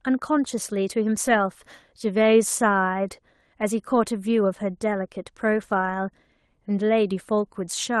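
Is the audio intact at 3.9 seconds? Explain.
No. From 3.91 to 3.97 s a lost packet was rebuilt from error correction. About 40 ms, which fits two 20 ms Opus frames, went missing in the call path. The decoder filled them from the lower-bitrate copies carried in the following packets, so the sound never drops out, but that stretch turns briefly rougher and grainier. Plain packet-loss concealment would instead guess the missing audio from what came before, giving a smeared, buzzy repeat or a fade toward silence.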